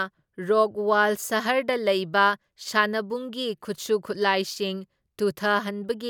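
No technical faults can be heard anywhere in the recording. Nothing along the way disturbs the speech.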